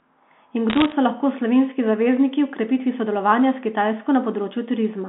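A short speech recording carried over a narrowband telephone line, with its band running from about 200 Hz to 3.6 kHz. From 0.70 to 0.92 s, bit errors on the digital phone line cause a brief burst of crackle. Each flipped bit corrupts a single sample. When the sign bit or a high-order bit is hit, the sample jumps and gives a sharp tick. A little under one percent of bits go wrong. The underlying speech stays unchanged.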